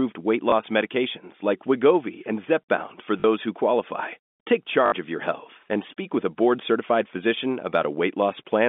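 Packet loss with the last packet repeated shows up at 0.50–0.52 s, 3.20–3.24 s and 4.86–4.92 s, over the G.711 telephone band. Each gap's filled by replaying audio, buzzing robotically on longer runs, consistent with 20 ms packets.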